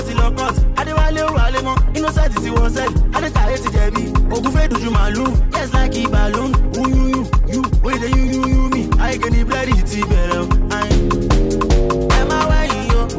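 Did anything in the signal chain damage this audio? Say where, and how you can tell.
No, nothing in the signal chain audibly damaged this audio. No stage, from capture through to playback, leaves a mark that can be heard in the recording.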